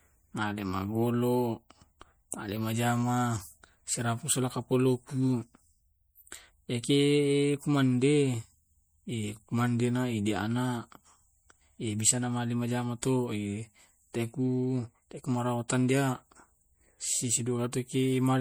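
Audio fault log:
Throughout, MP3 compression: the speech carries a plainly audible watery, swirly texture, likely from a lean encode that fits around 64 kbps. Too few bits means weak frequency lines get dropped and return frame to frame, though the treble still reaches about 21.1 kHz.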